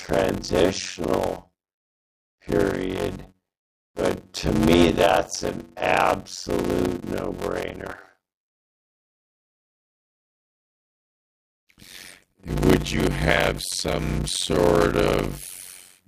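From start to finish the speech carries a steady buzz at about 92 Hz and plays at only 0.53 times normal speed while keeping roughly its natural pitch. This is a padded block size mismatch: short blocks, which fits 256 samples each, are zero-filled to a larger read size, so every block gets a gap.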